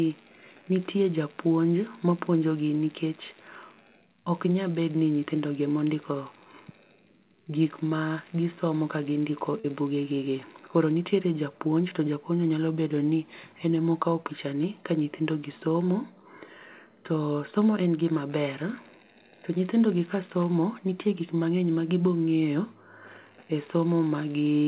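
At 9.6 s there's a short concealed packet loss. 40 ms of the call reached the decoder too late, so the receiver bridged the gap by stretching the preceding sound, then blended back in. It comes across as a quick smear in the speech, against the call's narrowband sound that stops around 4 kHz.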